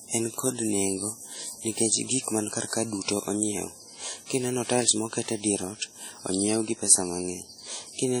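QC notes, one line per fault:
Throughout, WMA compression: the speech sounds ringing and washy, with a hiss that swells and fades along with it. This is likely heavy transform-codec quantisation, consistent with a bitrate near 32 kbps, spreading noise across tens of milliseconds and zeroing weak components.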